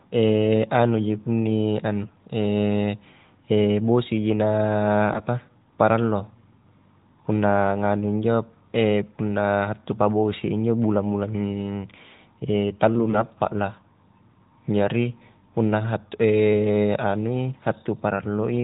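From 5.12 to 5.21 s, AMR bit errors hit the narrowband speech. Flipped low-priority bits misplace excitation pulses and skew gains, giving a brief hoarse, gargly scratch.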